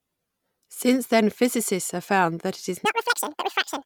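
From 2.85 s, right after "found that it is", the audio is read two samples at a time, so speech plays at double speed and an octave higher. On a spectrogram, harmonics jump up and spread apart.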